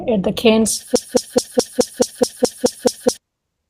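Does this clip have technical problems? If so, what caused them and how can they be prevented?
Yes. At 0.61 s, just after "at the", what sounds like a single lost 20 ms packet was rebuilt from the low-bitrate copy carried in the next one, a lost packet rebuilt from error correction: no gap, but a brief rougher, noisier patch. Stronger network paths or larger jitter buffers prevent it.

From 0.96 to 3.17 s, a stalled player, encoder or stream likely kept resending its last fragment, a broken-record loop: a 0.21 s piece repeats exactly ten times and the intended audio is lost. Stall detection with buffer flushing prevents it.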